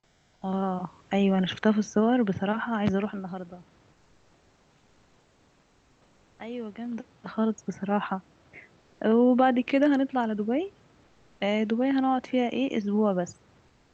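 A speech clip with two problems. In the pauses, at 0 to 0.41 s, 3.93 to 6.39 s, 11.05 to 11.39 s and 13.67 to 13.93 s, the room's background gives way to comfort noise, a flat, featureless hiss about 3 to 7 dB quieter, most likely Opus DTX halting transmission and the receiver synthesising filler. Then from 6.76 to 7.38 s there's zipper noise: a level move of roughly 15 dB applied in unsmoothed steps of about 2 dB, around 15 per second, so every jump ticks audibly on top of the sound. All of this sits within the Opus call path's 8 kHz audio bandwidth.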